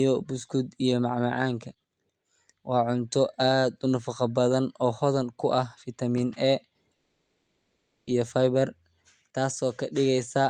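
A long network dropout runs from 6.95 s to 8.10 s. At 6.95 s the speech breaks off and the last sound is drawn out into a buzzy tail that fades over about 1.1 s, followed by roughly 70 ms of silence. Speech resumes at 8.10 s, but the 1.1 s in between never returns. The likely cause is that packets stopped arriving and the receiver concealed the gap by extending what it last had.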